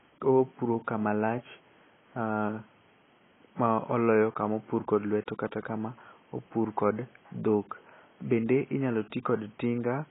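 Speech, with AAC compression damage running through the whole clip. Nothing is heard above about 3.8 kHz, so it sounds dull and muffled. The codec damage is heavy. That points to a very low bitrate, around 16 kbps, likely from AAC-LC encoding.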